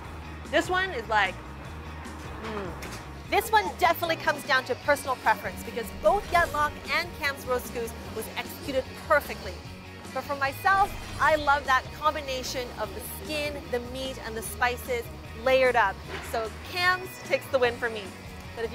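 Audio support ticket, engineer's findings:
Channel delay (comb filtering), 0.00 to 5.08 s. One channel about a single sample behind the other, then summed to mono, likely an interface or mix-bus alignment slip. First cancellation notch near 20 kHz: extreme top rolled off, dull.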